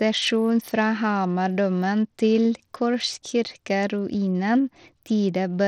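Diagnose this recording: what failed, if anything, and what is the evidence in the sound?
The failure is at the codec stage. Throughout the speech, plainly audible grit and a dulled top end are present, and nothing reaches above 18.8 kHz. The likely cause is Bluetooth SBC compression with a starved bit pool, which fits about 80 kbps. The upper sub-bands get too few bits, and the rest are coarsely quantised.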